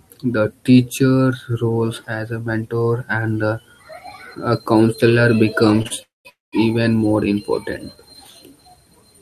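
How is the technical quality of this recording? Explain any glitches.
The recording has a cluster of timing glitches in the speech between about 5.8 and 6.5 seconds, just before "even more".

Two short stalls from a late packet sit back to back, at 5.82 to 5.87 s and 5.87 to 5.92 s. A sound is held slightly too long with a faint buzz or dip, stretched by 27 ms and then 34 ms. The jitter buffer briefly ran dry, so the receiver extended the last sound until the packet turned up and then resumed at the same point. Nothing is lost.

Two call audio freezes follow, at 6.02 to 6.27 s and 6.29 to 6.54 s. Each one starts as a brief continuation of the last sound as a buzz or hiss, then drops to silence for about 170 ms before the speech picks up exactly where it stopped. Each inserts roughly a quarter of a second of delay. This is likely packets held up in transit leaving the jitter buffer empty long enough for the fill to fade out.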